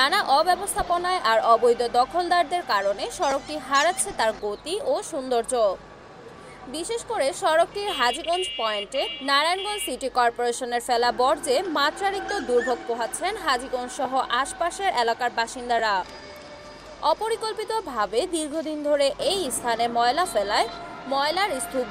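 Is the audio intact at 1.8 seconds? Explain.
Yes, the audio is intact at 1.8 seconds, with only the light lossy compression that runs through the whole clip.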